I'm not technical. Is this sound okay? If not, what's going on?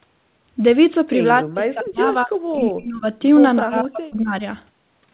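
No. The speech sinks away or breaks up three times: from 1.41 to 2.32 s, from 2.53 to 3.05 s, and from 3.59 to 4.42 s, almost vanishing in the first and last. This is likely speech suppressed in double talk, where the call's echo canceller mistakes the talker for echo while the far side is also speaking.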